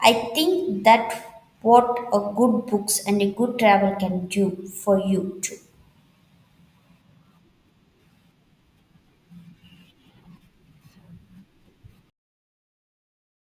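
No technical faults are audible anywhere here.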